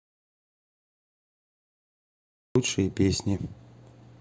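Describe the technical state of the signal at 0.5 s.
At 0.5 s the clip is inside an audio dropout to silence that is already under way when the recording begins and lasts until about 2.56 s. The input was likely lost while silence kept being written, so there is total silence with no room tone, a dead-flat line on the waveform and a completely blank spectrogram until the speech returns abruptly.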